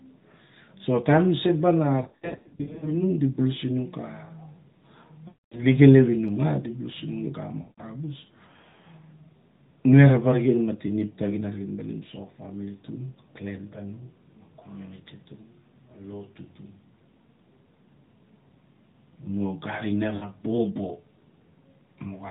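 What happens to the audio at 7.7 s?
Lost AMR speech frames, from 7.62 to 7.82 s: for about 160 ms the decoder keeps replaying the last good pitch and vocal tract settings at falling gain, so the speech smears into a drawn-out buzz that fades toward silence. A plain dropout would cut straight to silence instead.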